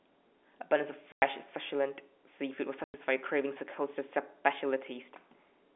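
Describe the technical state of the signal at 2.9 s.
At 2.9 s the signal is inside a dropout from 2.84 to 2.94 s: packet loss filled with silence. About 100 ms of audio is missing, which fits five lost 20 ms packets, and the receiver plays digital silence with abrupt edges against the narrow telephone-band G.711 sound.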